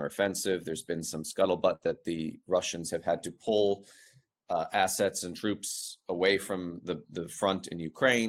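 A speech recording with two kinds of network fault. At 1.75 to 1.89 s, just after "been some", there is a burst of packet loss: a run of audio arrived too late or not at all, so the receiver stretched the last sound for about 55 ms and faded it out. About 60 ms of speech is simply skipped, and the stream picks up further on with a slight timing slip of about 12 ms. Overlapping the end of that gap, from 1.83 to 1.90 s, lost packets were rebuilt from error correction. The decoder played the low-bitrate backup copies carried in later packets, which covers about 40 ms with grainier, noisier sound instead of silence. The same repair happens again at 3.46 to 3.48 s, right after "have had to". There, a stretch of about 20 ms, which fits a single lost packet, was replaced by its coarse backup, giving a brief rough patch with no audible gap.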